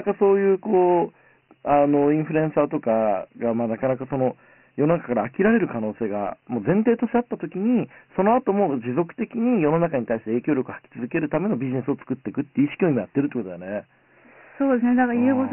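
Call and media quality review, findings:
Dialogic VOX ADPCM, throughout. Speech band stops hard at 3 kHz, short of the line's 3.6 kHz edge. Heavy gritty hiss follows the speech, not steady. Fits 4-bit OKI ADPCM at 6,000 samples/s. Plain narrowband telephony stays clean.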